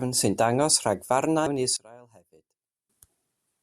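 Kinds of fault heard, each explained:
Damaged data in a compressed stream: at 1.47 s corrupted bytes make the decoder lose frame sync and search for the next frame header.
One channel inverted: from 1.77 to 2.90 s the speech drops by about 24 dB, likely because one channel's polarity is reversed, cancelling centred sound in mono.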